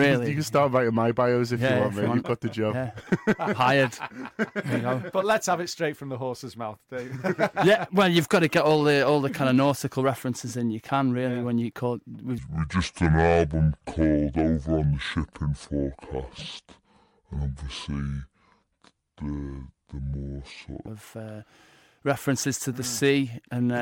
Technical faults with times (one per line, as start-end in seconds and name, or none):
12.38-20.87 section at the wrong speed